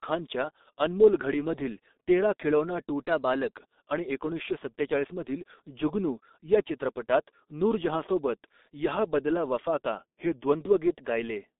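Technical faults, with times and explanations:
Throughout, G.723.1 codec: the speech is carried at what sounds like about 6.3 kbit/s through a narrow telephone band of roughly 250 Hz to 3.7 kHz, with nothing above 3.8 kHz. The codec models the voice in coarse 30 ms frames and updates that model slowly, so the damage is heavy: a muffled, hoarse tone and smeared consonants. On a spectrogram the energy stops at a flat ceiling near 3.8 kHz, and the harmonics look blurred rather than crisp.
3.03 to 3.57 s, drift correction step: just before "आणि एकोणीसशे सत्तेचाळीस मधील", the audio suddenly plays about 5.9% fast, raising pitch by about 99 cents, nearly a semitone, for roughly half a second before snapping back. This is likely a clock-matching routine that changed the playback rate in one jump to correct its buffer. On a spectrogram the harmonic lines step upward together for that span; the waveform looks compressed in time.
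9.98 to 10.52 s, drift correction step: right after "बदला वफा का'", the reverse happens, with playback about 5.9% slow and pitch down about 105 cents for roughly half a second, then an abrupt return. A rate correction in the other direction likely explains the sagging, drawn-out sound. On a spectrogram the harmonics drop as a block by about a semitone, and the waveform's cycles appear stretched before resuming normal spacing.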